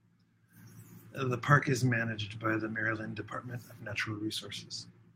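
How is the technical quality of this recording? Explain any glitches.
The recording has three brief glitches, all lost packets rebuilt from error correction, at 1.45–1.47 s, 1.57–1.59 s and 1.85–1.87 s. Each 20 ms stretch was lost in transit and replaced by a low-bitrate copy carried in the next packet, so there's no gap. The speech just turns momentarily rougher and noisier. On a waveform nothing drops out; a spectrogram shows short, smeared, grainier patches.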